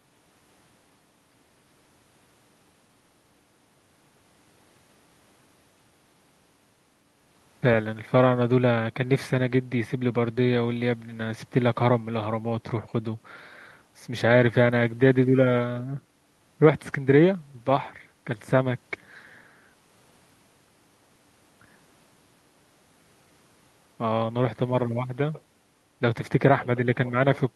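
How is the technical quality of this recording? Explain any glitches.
No technical faults are audible.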